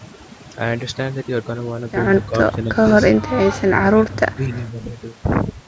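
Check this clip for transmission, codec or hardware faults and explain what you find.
Two faults are audible in this speech clip: heavy-handed noise reduction throughout, and two stretches where the talker is pushed down.

Overdone noise removal runs the whole clip. Bands near the noise estimate are gated off, leaving near-silent gaps with twinkling specks.

Speech suppressed in double talk occurs at 2.25–2.78 s, dropping about 15 dB, and at 3.83–4.59 s, dropping about 20 dB. The speech dips, likely because an echo canceller could not separate the talker from simultaneous loudspeaker echo and turned both down.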